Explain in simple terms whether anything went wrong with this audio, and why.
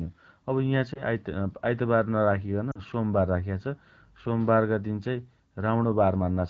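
Lost AMR speech frames cause a brief dip or warble at 0.93 to 1.03 s and a quick fade toward near-silence at 2.71 to 2.80 s. Radio errors corrupted the data, so the phone briefly guessed the speech.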